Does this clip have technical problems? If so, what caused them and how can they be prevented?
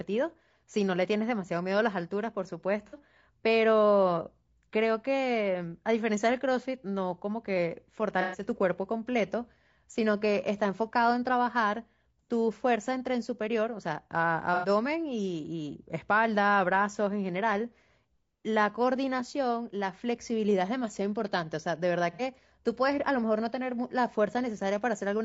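Yes. Throughout, the speech sounds rough and grainy, with noise between the harmonics and a thin, synthetic top band, likely from low-delay AAC compression (AAC-ELD) at a low bitrate, around 32 kbps. Raising the bitrate, or using a codec mode with longer frames when low delay isn't essential, would prevent this.

AAC frame loss with concealment causes brief smeared, noisy patches at 2.87 to 2.98 s, 8.21 to 8.41 s, 14.54 to 14.68 s and 22.13 to 22.22 s. In each, the decoder patches over lost frames by reusing the previous spectrum. Forward error correction, retransmission or a larger jitter buffer would prevent these gaps.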